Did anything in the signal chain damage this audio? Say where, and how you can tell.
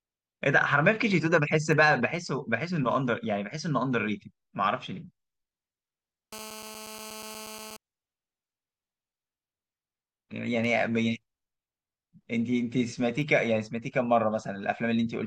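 Yes. Two isolated ticks sit at 1.73 s and 13.22 s, each a single-sample bit error spike of about −23 and −29 dBFS, broadband and unrelated to the speech. One flipped bit in storage or on a digital link made the sample value jump by a power of two and return.

From 6.33 s to 7.77 s a hard, raspy buzz with dense harmonics rides about 15 dB below the speech, steady throughout: GSM phone buzz. A nearby 2G handset on a call pulses its transmitter 217 times a second, and the analogue wiring or input stage rectifies those bursts into audio.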